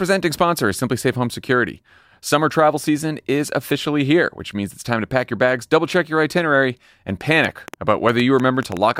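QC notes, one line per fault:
7.45–8.78 s, train of clicks: about ten similar pops at roughly 6 per second, unevenly spaced, around 10 dB above the sound, likely from electrical interference or a faulty connection or power supply.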